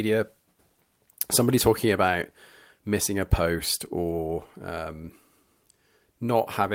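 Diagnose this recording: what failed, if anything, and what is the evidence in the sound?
Nothing failed; no faults audible.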